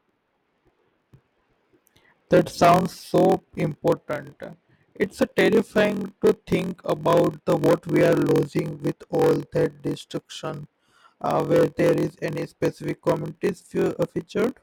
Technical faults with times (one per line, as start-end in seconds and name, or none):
0.00-14.62 block size mismatch (padded)